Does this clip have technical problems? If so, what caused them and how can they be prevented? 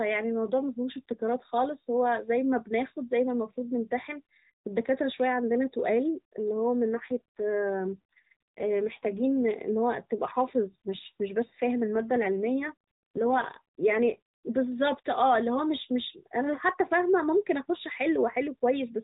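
Yes. AMR rate drop, from 6.93 to 9.54 s and from 11.96 to 14.19 s: a weak radio link forced the codec onto fewer speech bits, consistent with a step from 12.2 to 5.9 kbps, so the speech turns rougher and more synthetic with no gap. Keeping the phone in stronger coverage prevents the network from pushing the codec down to its lower rates.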